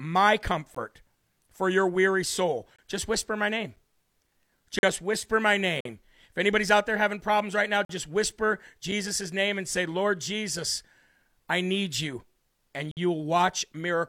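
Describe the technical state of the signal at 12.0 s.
At 12.0 s the speech signal is intact, with no audible technical fault at that point.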